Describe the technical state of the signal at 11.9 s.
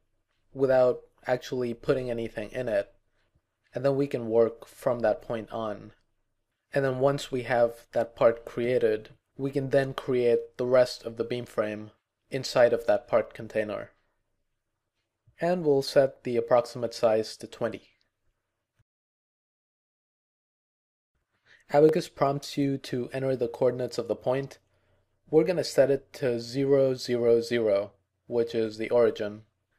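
At 11.9 s the signal is intact, with no dropout, distortion, glitch or other audible fault at that moment.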